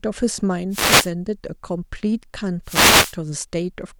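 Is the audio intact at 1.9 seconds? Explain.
Yes, at 1.9 seconds the speech plays through cleanly, with no dropout, click, glitch or other audible fault at that moment.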